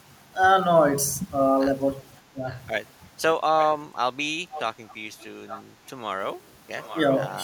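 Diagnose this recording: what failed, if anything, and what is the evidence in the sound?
Speech suppressed in double talk, at the call-processing stage. The speech dips about 20 dB for about a tenth of a second at 2.32–2.44, 3.40–3.51 and 4.19–4.26 s. The waveform envelope pinches sharply there, and the spectrogram shows faded columns. The likely cause is the echo canceller attenuating the talker while both sides spoke.

Echo leak, also in call processing. A faint copy of the sound returns 845 ms late at 2.50–2.56, 3.60–3.68, 4.50–5.62 and 6.85–7.17 s. It sits about 25 dB below the speech at first, then about 15 dB. The spectrogram shows weaker repeats of earlier harmonic patterns, shifted 845 ms. The likely cause is the far end's canceller not fully removing its loudspeaker pickup.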